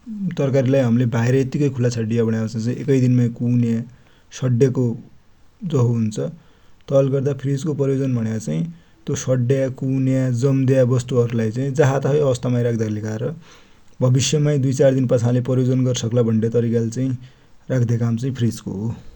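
No technical faults are audible anywhere in the recording.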